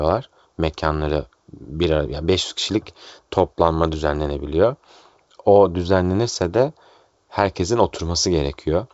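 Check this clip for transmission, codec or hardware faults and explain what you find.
No faults detected here.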